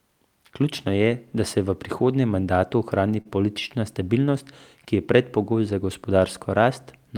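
At 3.21 to 3.27 s, just before "politična stabilnost ki je", the speech has a short stall from a late packet. A packet failed to arrive on time, so the jitter buffer ran dry. The receiver filled about 37 ms by extending the last sound, then resumed where it left off. No speech is lost, but the held sound stretches slightly with a slight buzz or dip, and everything afterward plays 37 ms later.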